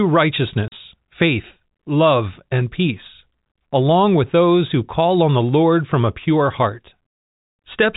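A speech clip carried over G.711 telephone coding, with nothing above 4 kHz. It has one gap from packet loss filled with silence, from 0.68 to 0.72 s, just before "faith love and peace". For 40 ms the audio drops to dead silence, which fits two lost 20 ms packets. The cuts are abrupt. A waveform shows a flat line with vertical edges, and a spectrogram shows a clean blank column.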